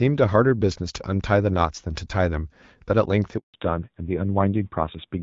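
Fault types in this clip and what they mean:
Handover gap: The call was passed from one network to another and no speech frames came through during the switch, so the speech fades out at 3.38 s and stays silent for 160 ms until the new link picks up at 3.54 s.
Fallback to narrowband: After the handover the call lost its HD Voice link and dropped to an older narrowband codec, probably around 7.4 kbit/s. From 3.54 s to the end nothing remains above 4 kHz, and the speech turns duller and rougher than the earlier wideband section.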